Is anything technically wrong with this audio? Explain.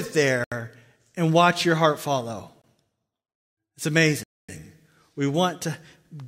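Yes, the speech drops out to dead silence three times: at 0.44 to 0.52 s (76 ms), at 2.62 s for 21 ms right after "watch your heart follow", and at 4.23 to 4.49 s (252 ms). These are Bluetooth stalls, likely from interference delaying packets until the headphones' buffer ran empty.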